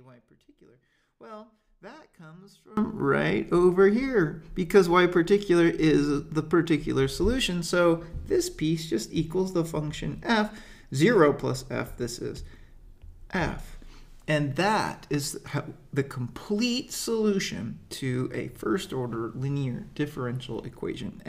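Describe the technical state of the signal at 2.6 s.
At 2.6 s the sound is faint, about 25 dB down, from the start to 2.77 s. The likely cause is one channel inverted, cancelling shared content when summed to mono.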